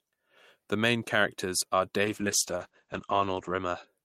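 After "main characters are", a call bitrate drop runs from 2.04 to 3.93 s. The sound turns muffled and rough, which fits about 48 falling to 10 kbps. The top end narrows from 20 kHz to 8 kHz.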